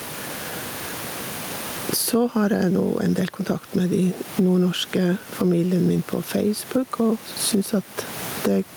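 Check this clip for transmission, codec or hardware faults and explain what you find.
One hardware-side fault is present: gain pumping, throughout the speech. The gain swings by roughly 20 dB, pulled down on every loud syllable, likely from excessive input gain with a fast limiter clamping it. The room noise sits about 30 dB below the speech.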